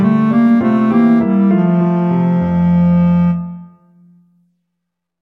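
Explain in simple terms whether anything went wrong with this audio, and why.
Nothing went wrong here; the audio sounds steady and intact all the way along, with nothing jumping out as a glitch or a problem.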